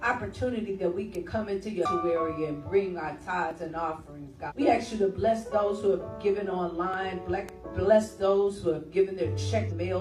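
Electrical switching spikes at 1.15 s and 7.49 s are each a sharp snap lasting only a millisecond or two, sitting on top of the sound rather than replacing it. They are likely caused by a nearby switch, motor or static discharge arcing briefly, with the audio line picking up that burst of interference as a tight, bright click. Damaged data in a compressed stream shows up three times, from 1.81 to 1.86 s, from 4.46 to 4.52 s and from 9.66 to 9.72 s, each lasting around 45 to 60 ms. Each is a short chirp or squawky blip where the decoder has hit corrupted frames, lost its sync and searched ahead for the next valid frame header, producing garbled output before the sound picks up again. Audio missing between chunks occurs at 3.51 s and 6.94 s, where around 20 ms of sound drops out and the two sides are butted together with no silence, giving a small skip and jolt in continuity. The repetition fits a recorder or processor handling the audio in roughly 4-second blocks, with the likely cause being a short piece lost each time one block is closed and the next opened.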